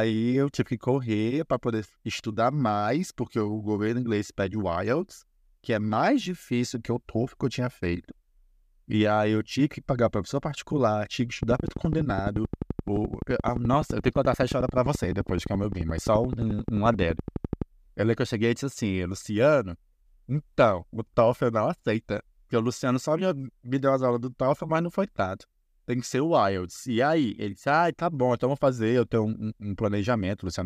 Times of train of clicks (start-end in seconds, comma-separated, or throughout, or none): 11.43-17.63